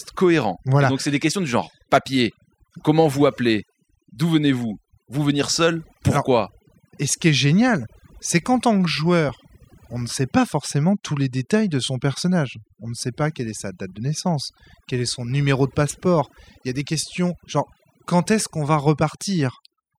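From start to finish the speech shows overdone noise removal: the reduction was set too aggressively, so individual frequency bands near the noise floor are cut right down, along with quieter parts of the voice. Pauses fall to near silence with twinkling specks.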